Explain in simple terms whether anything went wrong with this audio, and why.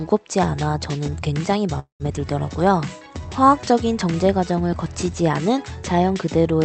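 At 1.79 s the sound stops moving forward for about a fifth of a second, until 2.02 s. A short fading buzz or hiss fills the start, then roughly 120 ms of near silence, then the audio carries on exactly where it left off. This is a call audio freeze, likely from packets arriving late on the call connection. Unlike a dropout, nothing is lost. The audio simply resumes about 0.2 s later than before.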